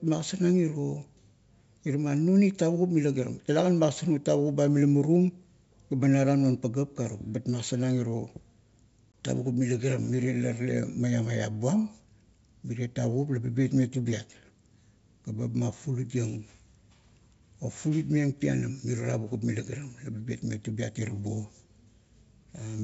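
Speech over what sounds like a G.722 wideband line, and there's a packet loss on an ADPCM call at 9.12 to 9.15 s: roughly a couple of packets (about 20 ms) drop to hard silence right before "tavukup mila", and the decoder's predictor has to resync afterwards.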